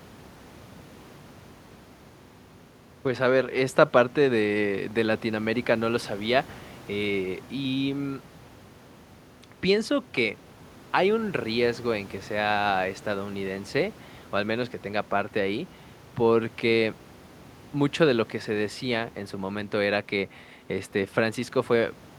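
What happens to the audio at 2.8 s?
Nothing goes wrong at 2.8 s: the speech continues without any dropout, click, distortion or other fault at that moment.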